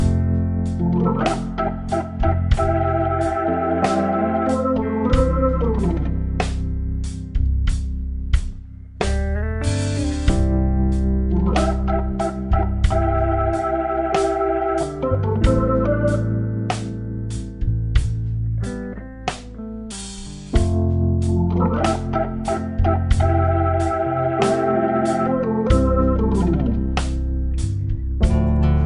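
From the first second to the last, the whole thing is running at the wrong sample rate. Everything plays at two-thirds of its proper speed, and the pitch drops by about seven semitones along with it, so the audio sounds sluggish, heavy and a fifth too low. That ratio fits material captured at 48 kHz being played back at 32 kHz with no rate conversion in between.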